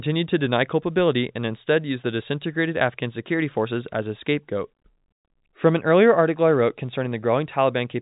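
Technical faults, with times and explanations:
Nothing stood out on listening; the speech comes through G.711 telephone coding, with nothing above 3.8 kHz, as that format requires.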